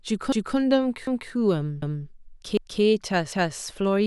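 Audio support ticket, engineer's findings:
Overlapping chunks in the streaming or processing stage. Each 0.5 s chunk starts 250 ms before the previous one ends, so 250 ms of speech plays twice. Stutters at 0.32–0.57, 1.07–1.32, 1.82–2.07, 2.57–2.82 and 3.32–3.57 s, every 0.75 s.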